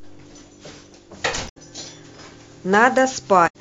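At 1.45 to 1.57 s and again at 3.44 to 3.55 s, damaged data in a compressed stream makes the decoder misread frames and lose sync, producing a brief disruption. A spectrogram shows an abrupt break in the speech harmonics; the waveform shows a jagged discontinuity.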